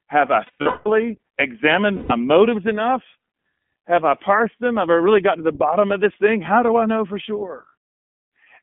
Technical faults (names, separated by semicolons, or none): iLBC codec; lost iLBC frames